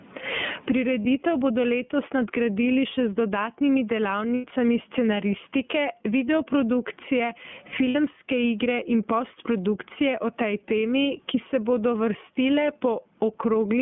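Gain pumping runs through the whole recording. The gain swings by about 20 dB. Loud and quiet passages sit close together. The likely cause is gain set far too high, with a fast limiter clamping it back down.

The speech also carries iLBC codec damage throughout, and it is plainly audible. The band runs only from about 150 Hz to 3.4 kHz. Each 30 ms frame is coded on its own, and the voice sounds rough and slightly synthetic. The quality fits the 13.33 kbps mode.

Lost iLBC frames break in three times. At 1.02 s a 30 ms gap fits one missing frame. At 4.35 s a 90 ms gap fits three, and at 7.89 s a 60 ms gap fits two. The decoder repeats the last pitch cycle mixed with noise. Each gap sounds like a held, buzzy vowel, and the voice recovers almost at once.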